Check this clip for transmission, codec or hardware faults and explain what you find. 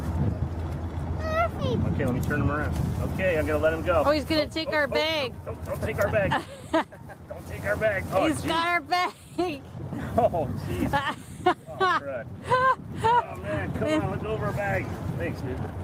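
Two faults are audible: one skip ahead and three bursts of jitter buffer speed-up.

At 1.59 s the sound jumps abruptly forward with no gap. Roughly 0.4 s of audio was dropped, and the two sides were joined directly: a skip ahead.

From 3.29 to 4.10 s and from 4.51 to 5.42 s, the audio runs about 4% fast at unchanged pitch. From 6.46 to 7.00 s it runs about 11% fast and sounds noticeably hurried. This is jitter buffer speed-up: an overfull buffer trimmed repeated pitch-period slices, a few tens of milliseconds per burst, to reduce delay.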